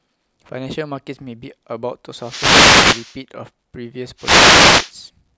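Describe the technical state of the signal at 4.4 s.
At 4.4 s the signal sits inside a wireless microphone noise hit running from about 4.17 to 4.93 s. The FM radio link from the microphone to its receiver fades as reflected paths cancel the direct signal, so the receiver's own noise floor rises into the audio. It sounds like a swish of static lasting roughly three-quarters of a second.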